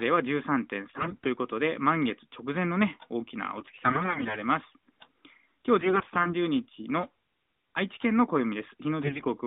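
Speech turns hoarse, scratchy and gargly in four bursts, from 0.98 to 1.27 s, 3.58 to 4.40 s, 5.80 to 6.35 s and 9.04 to 9.26 s, while pitch and loudness roughly hold. These are AMR bit errors. A weak link flipped the lightly protected bits in each frame, apparently between a tenth and a fifth of them, so excitation pulses landed wrongly and the finer pitch, gain and spectral values were corrupted. The narrowband AMR mobile codec behind this keeps the speech within about 200 Hz to 3.7 kHz, with only light coding colour, which fits its 12.2 kbps mode.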